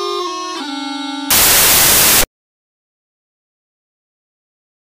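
From 1.30 s to 2.97 s the audio turns into loud, harsh broadband noise: samples built from the wrong bytes. The reader assembles each sample misaligned or byte-swapped, so the rapidly changing low-order bits land in the high-order position, producing broadband hash.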